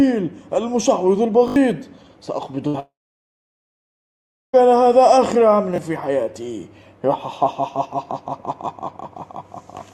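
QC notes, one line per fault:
1.48–1.56 s and 5.76–5.78 s, repeated buffer: a 20 ms piece of sound plays again with a hard join at each repeat, four extra times in the first case and once in the second. The device ran short of fresh audio and replayed its last buffer. This causes a brief stutter and skips roughly 70 ms and 20 ms of audio.
2.67–2.76 s, burst of packet loss: the sound holds and fades as concealment stretches the last received audio across about 64 ms. Playback then resumes with about 60 ms missing, because several packets were lost or arrived too late to be played.
2.80–4.55 s, long network dropout: the last sound is carried on briefly as a fading fill, then about 1.62 s of silence follows before the audio returns further on. About 1.74 s is lost, most likely because no packets arrived during that stretch.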